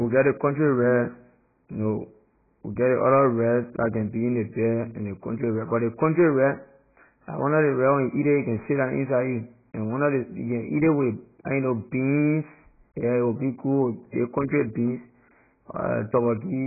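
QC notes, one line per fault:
Throughout: AAC compression, likely AAC-LC at a very low rate. Nothing above 2.5 kHz survives, so the speech loses its sibilants and crisp consonant edges and sounds dull and boxy. The damage is heavy. With so few bits, the encoder discards the upper band entirely and quantises the remaining spectrum coarsely frame by frame. That leaves a smeared, warbling texture on sustained sounds, which fits a bitrate near 12 kbps.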